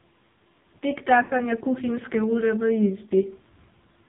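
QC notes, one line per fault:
throughout: AMR narrowband mobile codec, heavily damaged; nothing above 4 kHz, and a buzzy, synthetic timbre that a plain low-pass filter wouldn't give, which fits a low-rate mode around 5.9 kbps.
1.24–1.33 s: lost AMR speech frames; a 60 ms stretch is drawn out and fades as the decoder repeats earlier settings, not a hard silent dropout.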